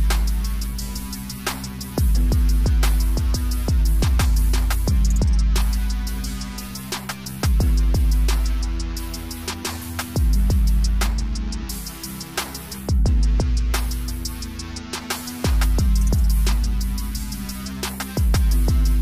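No technical faults can be heard anywhere in the signal.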